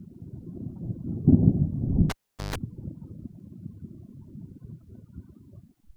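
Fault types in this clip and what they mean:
Cable pulled and plugged in, 2.10 to 2.56 s: a live cable is yanked and reinserted, so a pop drops the sound into near silence for about 0.41 s, then a 0.14 s burst of 50 Hz mains buzz as the plug tip makes contact, and a second pop restores the signal.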